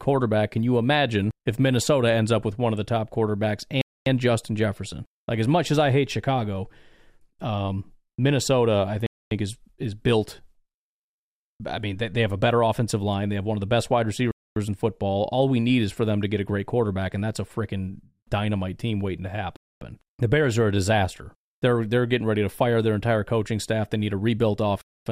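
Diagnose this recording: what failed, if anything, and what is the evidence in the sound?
Gap between chunks, at the storage or playback stage: silences of 250 ms start at 3.81, 9.06, 14.31, 19.56 and 24.81 s. Their regular spacing fits audio delivered in 5-second chunks, with each chunk followed by a silence of padding or a late start.

DAB burbling, at the codec and transmission stage: a brief patch of burbling runs from 4.86 to 4.90 s, spanning two audio frames. A very low rate of residual bit errors has corrupted the MP2 audio data, putting short blips of noise into single sub-bands.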